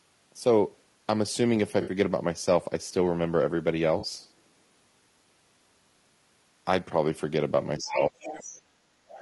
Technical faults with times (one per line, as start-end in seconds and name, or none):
0.00-9.21 low-delay AAC compression
1.81-1.91 AAC frame loss with concealment
3.99-4.05 AAC frame loss with concealment
7.80-8.14 speech suppressed in double talk
7.80-8.52 other side's voice leaking through
8.47-8.99 speech suppressed in double talk
9.12-9.21 other side's voice leaking through